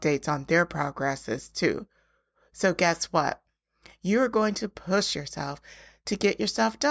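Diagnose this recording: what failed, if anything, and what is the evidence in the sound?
Nothing failed: no stage of the chain, from capture through to playback, leaves an audible trace in this speech recording.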